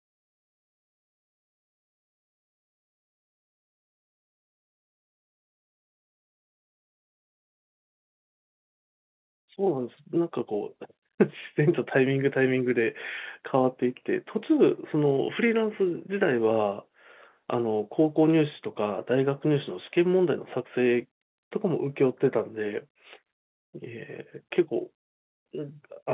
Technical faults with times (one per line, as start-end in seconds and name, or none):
none